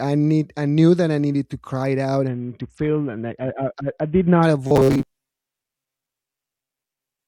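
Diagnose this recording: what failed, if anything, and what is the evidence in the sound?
Bluetooth SBC bit pool drop, 2.28 to 4.43 s, at the codec stage over the wireless link. The speech loses its treble and takes on a gritty, grainy noise for those two seconds. That points to the encoder cutting its bit pool from 31 down to about 6, roughly 55 kbps, while the link was congested. At that allocation the highest sub-bands get almost no bits and the remaining bands are quantised coarsely. Quality returns once the rate recovers.

Robotic sound from repeated short buffers, 4.67 s to the end at 7.27 s, most likely at the driver or buffer stage. The speech becomes a rigid, metallic buzz locked at 133 Hz while still loosely tracking the speech contour. That pitch corresponds to a segment of about 7.5 ms being replayed over and over. Incoming audio is likely arriving too rarely, so the player repeats its last short chunk to fill the gaps. 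Most of this stretch is repeated material, and the real audio in between is skipped.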